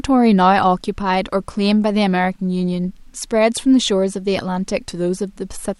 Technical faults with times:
none

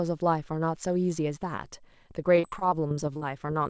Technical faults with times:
2.36-3.67 repeated packet loss (robotic sound)

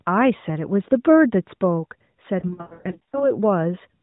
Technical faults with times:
0.38-0.44 lost AMR speech frames
2.40-3.30 lost AMR speech frames

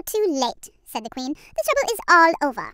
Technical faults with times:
0.00-2.74 wrong sample rate

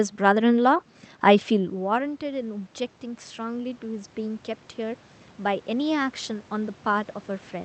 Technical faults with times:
1.53-7.64 automatic gain rising

